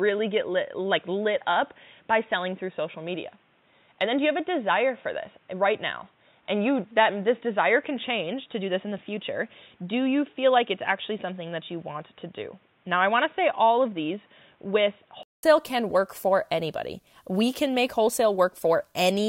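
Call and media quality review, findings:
Input switched to a poorer device, 0.0 to 15.43 s. Dull, boxy audio, nothing above 3.8 kHz, with a faint added noise floor. Likely a headset call profile. About 0.2 s of silence, then full band returns before "can work for anybody".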